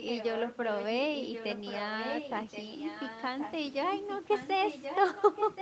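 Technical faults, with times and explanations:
0.0–0.97 s, 1.15–3.53 s, 4.09–4.49 s and 4.66–5.62 s, echo leak: a copy of the speech returns about 1.08 s late, roughly 10 dB below it, and louder in the last stretch. The likely cause is a far-end loudspeaker whose echo canceller let residue back.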